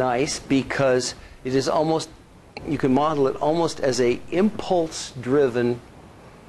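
At 2.79 s a DC step shifts the waveform's zero line by about -38 dBFS until 4.87 s, giving a low thump at each edge, seen as broadband spectrogram ticks.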